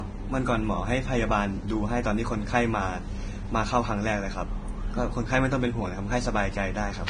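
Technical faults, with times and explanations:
Throughout: low-bitrate audio saved at a high bitrate. The speech stops dead above 9.7 kHz. This is likely a low-bitrate encode later resaved as high-bitrate MP3, which cannot restore the lost top.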